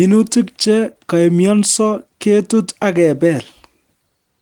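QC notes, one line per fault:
No faults are heard in this speech clip. The Opus voice compression keeps the full band, with content reaching up to about 20 kHz, and leaves only light coding traces, which fits a hybrid mode at around 24 kbps.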